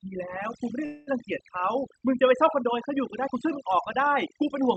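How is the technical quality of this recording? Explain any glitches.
The recording has two clear problems: heavy-handed noise suppression throughout, and one brief stall early on.

Overdone noise removal runs through the whole clip. A suppressor set too aggressively keeps pulling individual frequency bands down whenever they sit near its noise estimate, taking softer speech detail with them. The background collapses into near silence flecked with twinkling specks.

From 0.85 to 1.09 s there is a call audio freeze. Packets were likely delayed in transit, leaving the jitter buffer empty, so the receiver stretched the last sound into a fading buzz or hiss for about 217 ms. Speech then picks up exactly where it stopped, nothing skipped, but everything afterwards arrives later.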